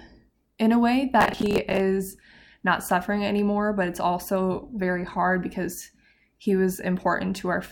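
Just after "in a way", from 1.21 to 1.80 s, a gritty tearing crackle rides over the speech and then stops. This is processor overload crackle. The processor fell behind and missed a long run of buffer deadlines, each leaving a hard-edged fragment of stale audio in place of the new signal. The texture suggests buffers of around 10 ms, with roughly twenty misses piling up across that stretch.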